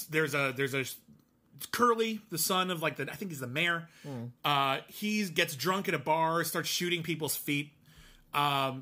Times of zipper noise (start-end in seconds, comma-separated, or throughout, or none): none